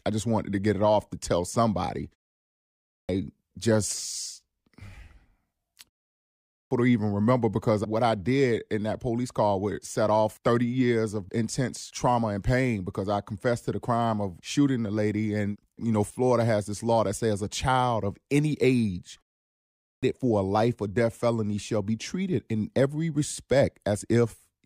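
Clipped start after a pause at 2.65, 6.21 and 19.61 s in this speech: after short silences of roughly half a second, the output device drops into a low-power state and needs time to wake, so about 0.4 to 0.5 s of each following phrase is lost and it begins abruptly.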